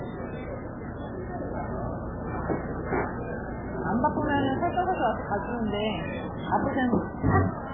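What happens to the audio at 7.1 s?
At 7.1 s, as across the whole clip, nothing above 3.6 kHz survives, and the remaining sound is watery and swirly with smeared attacks. The likely cause is heavy MP3 compression at a very low bitrate, around 8 kbps, which cuts the treble and switches weak frequency lines on and off between frames.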